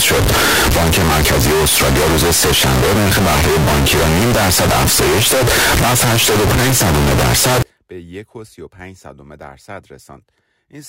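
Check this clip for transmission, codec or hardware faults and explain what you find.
One fault is present: float read as integer, from the start to 7.62 s. Throughout that stretch the speech is extremely loud and harsh, with background noise pushed up to the same level as the talker, though pitch can still be followed. The likely cause is 32-bit floating-point samples being interpreted as 32-bit integers, so the sign and exponent bits dominate each value and the waveform collapses into a near-square shape at an almost fixed, high level.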